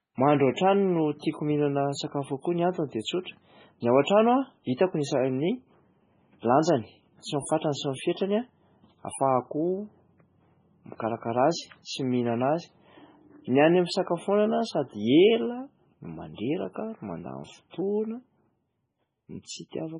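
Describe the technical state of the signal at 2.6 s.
At 2.6 s the speech shows the same state as the whole clip. Nothing sounds above 10.5 kHz, and the top end is dull and smeared. This is likely low-bitrate audio saved at a high bitrate: a heavily compressed MP3 re-encoded larger, keeping the original losses.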